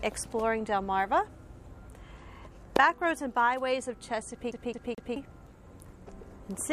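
From 4.52 s to 5.16 s the audio shows a CD stuck on one turn: a scratch sends the laser back a track each revolution, so the same 0.22 s fragment plays three times, separated by brief mutes at each jump, giving a fast, even mechanical stutter.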